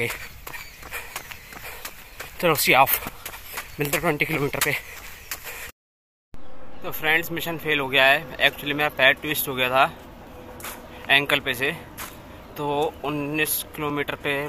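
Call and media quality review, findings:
Clock drift buffer slips: regular click every 3.62 s, 3.05 to 13.90 s. Likely two independently clocked devices drifting by around 700 ppm, so the buffer periodically drops or repeats a block of roughly 150 samples. Waveform shows step discontinuities; spectrogram shows evenly spaced thin vertical broadband lines.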